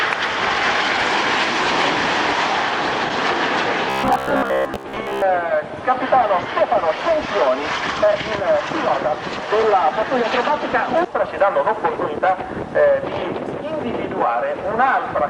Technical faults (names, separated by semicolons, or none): robotic sound from repeated short buffers